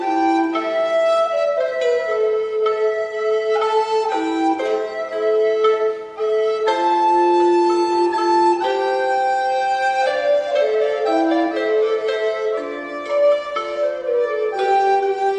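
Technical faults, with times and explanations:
No technical faults can be heard in this clip.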